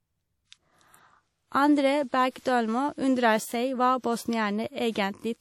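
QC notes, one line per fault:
Throughout, WMA compression: plainly ringing, washy speech, hiss breathing with the signal, nothing above 17.4 kHz; likely a low-bitrate WMA encode, around 48 kbps.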